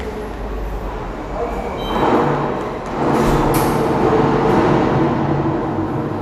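No technical faults can be heard anywhere in the audio, and the signal stays intact for its whole duration.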